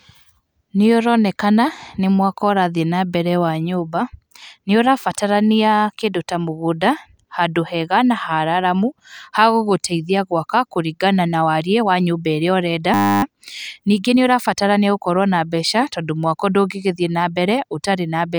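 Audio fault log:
12.94–13.23 s, system hang loop: a single 10 ms slice of the speech repeats exactly, producing a steady buzz at 100 Hz instead of the voice, consistent with a frozen driver and hardware cycling a 10 ms buffer; essentially no audio appears lost afterward.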